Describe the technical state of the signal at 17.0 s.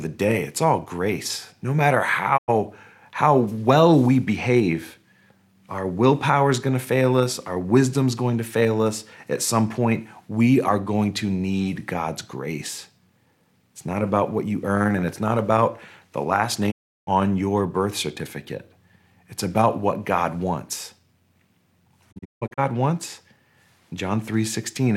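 At 17.0 s the signal is inside a digital broadcast dropout, from 16.70 to 17.09 s, between "not about the last" and "on your birth certificate". The receiver muted on failed frames, fading out in 20 ms to true silence. Unlike error concealment, nothing is smeared or repeated, and 0.35 s is lost outright.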